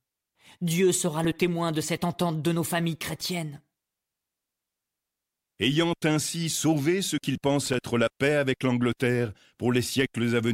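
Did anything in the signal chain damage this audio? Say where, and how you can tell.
Yes. The damage is in the analogue wiring, where a worn or dirty contact in a cable connector is intermittently losing contact. This is loose connector crackle. It appears as two short, irregular bursts of scratchy crackle in the speech. The first runs from 3.20 to 3.26 s, just after "entente de nos familles". The second runs from 7.66 to 7.74 s, between "ainsi sauvé ce qu'il" and "la paix avec". Each time the contact makes and breaks, the signal is chopped into ragged fragments, and that produces the crackle.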